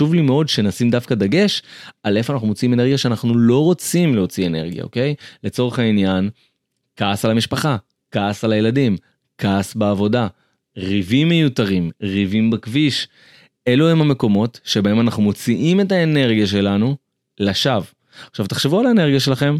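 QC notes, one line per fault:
Nothing to flag here; the speech comes across with no faults at all.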